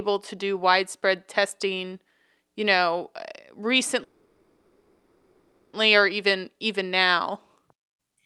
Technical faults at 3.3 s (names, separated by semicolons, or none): none